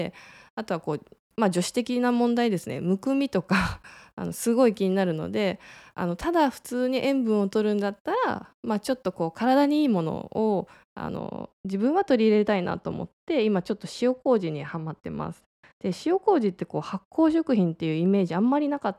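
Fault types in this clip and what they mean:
De-emphasis applied wrongly: from 11.17 s to the end at 18.98 s, a treble-cutting filter meant to reverse pre-emphasis acts on speech that either never received any boost or was already de-emphasized, so highs fall away smoothly, about 10 dB down at 10 kHz relative to 1 kHz, leaving the voice dull and muffled.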